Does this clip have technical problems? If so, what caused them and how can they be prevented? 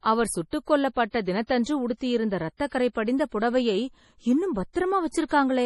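Yes. MP3 compression runs through the whole clip: the speech is heavily damaged, with nothing above about 11.5 kHz and a watery, swirling quality, the likely result of an MP3 encode at a starved bitrate that fits something near 32 kbps. With too few bits, the encoder discards the top of the spectrum outright and drops quieter frequency lines, which flicker in and out between frames and leave sibilants chirpy and thin. Encoding at a higher bitrate, or keeping an uncompressed master, prevents it.

Pre-echo appears at 1.95 to 2.01 s, 5.11 to 5.14 s and 5.28 to 5.31 s, as a short hiss leading sharp onsets by about 57, 30 and 23 ms respectively. Each attack lands late in a transform block, so the quantisation noise sized for the loud onset is smeared across the whole block, including the quiet stretch before it, and the attack itself sounds softened. A higher bitrate or a codec with better block switching for transients avoids this.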